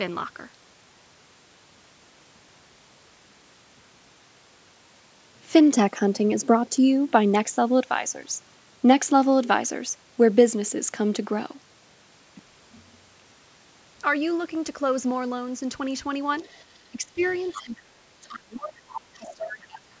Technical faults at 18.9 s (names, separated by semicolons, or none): speech suppressed in double talk; other side's voice leaking through